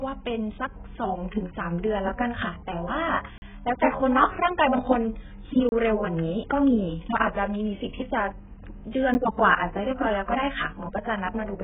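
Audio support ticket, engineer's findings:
AAC compression, whole clip: speech band-limited, nothing above 3.7 kHz, dull and warbly; heavy codec damage likely from AAC-LC at a very low bitrate, consistent with about 8 kbps.

Block of digital silence at 3.38–3.42 s (40 ms), 5.69–5.72 s (30 ms), 9.14 s (10 ms): hard dropouts; output buffer probably not filled in time.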